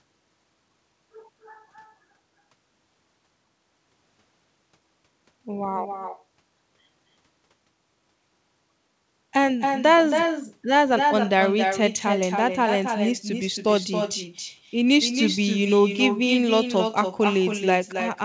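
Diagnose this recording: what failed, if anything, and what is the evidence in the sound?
The failure's in call processing: echo with no canceller. All the way through the speech, every phrase comes back about a third of a second later, only about 6 dB down. The far end's loudspeaker feeds its microphone and nothing strips it out, so the echo rides the G.722 path, which tops out at 8 kHz.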